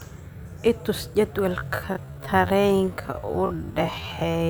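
At 1.5 s the speech abruptly drops to half its pace and stays there to the end, while pitch is unchanged. This is a time-stretched section, likely from software lengthening the audio by repeating short pieces, which makes it drag.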